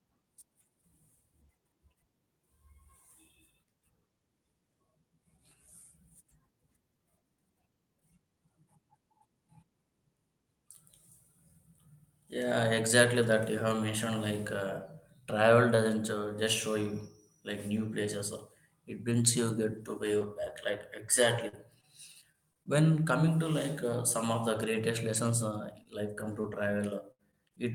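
A speech recording with two stretches of brief ticks, smears and hiccups, from 19.09 to 22.68 s and again from 24.58 to 27.58 s, just after "uh some of the". Both are scattered short gaps: about seven packets in each stretch arrived late or not at all, 160 ms and 180 ms missing in total. The receiver bridged each hole by extending the preceding sound, with the longest gaps around 50 ms and 70 ms respectively.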